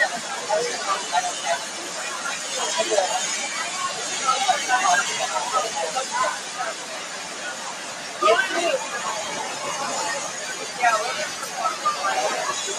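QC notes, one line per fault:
throughout: noise suppressor applied to music or sounds. A speech-tuned suppressor treats sustained tones, ambience and reverb as noise. Gain swings of roughly 10 dB let onsets through while held material and tails are pulled down, so the sound pumps and thins.
1.65 to 1.8 s, 6.4 to 6.57 s, 6.74 to 8.2 s: sound cut by the noise suppressor. Steady or decaying sound was misread as noise and dropped by up to about 4 dB, roughly a second of it within the last span. Level sinks and decays shorten.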